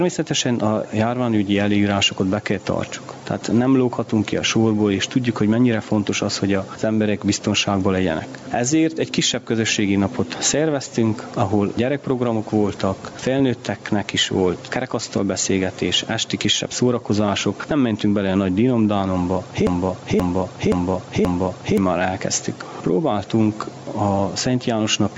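Gain pumping runs through the whole clip: the gain swings by about 10 dB. This is likely a fast limiter or compressor clamping down on input gain set far too high for the microphone, which leaves the sound squashed and its loud and soft passages unnaturally close in level.

A broken-record loop follows from 19.67 s to 21.78 s, where one 0.53 s fragment plays four times back to back, identical each time. The stream likely stalled and kept resending the last piece it held, so whatever should have sounded in that stretch is missing, and the top end stops near 8 kHz, as call microphone processing leaves it.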